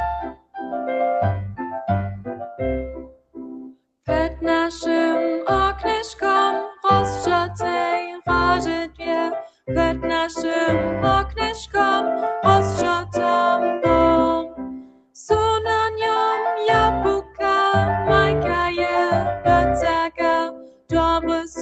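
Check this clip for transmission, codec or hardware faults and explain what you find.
Two related faults stand out, both from a speech noise suppressor left running on non-speech audio.

Noise suppressor applied to music or sounds: a suppressor tuned for voice stays active throughout and treats sustained tones, ambience and decays as noise. Its gain keeps shifting by roughly 5 dB, so held sound pumps and thins while sharp onsets pass mostly intact.

Sound cut by the noise suppressor: at 0.26–0.57, 2.29–2.6, 2.96–3.39, 3.59–4.07, 9.47–9.68, 14.49–15.16, 17.24–17.39 and 20.51–20.92 s, the suppressor judges the sound to be noise and clamps it. Drops reach about 21 dB, or about 11 dB at 2.29 and 17.24 s, so tails vanish abruptly.

The call path is band-limited with nothing above 8 kHz, which fits Opus at around 32 kbps.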